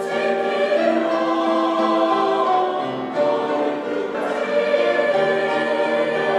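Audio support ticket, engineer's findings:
Skip at 4.14 s, audio jumps ahead. Compressed frames skipped: about one 32 ms frame lost or rejected by the decoder.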